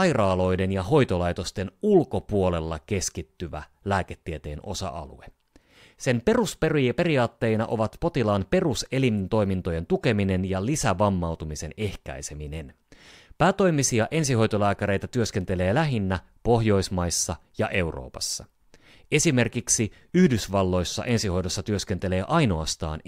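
From 0.66 s to 22.22 s, word clock ticks: sharp clicks of uneven strength roughly once a second, about twenty in all. An unlocked clock drifts about 20 ppm from the sender's, slipping one sample each time. Spectrograms show thin vertical lines, waveforms single-sample steps.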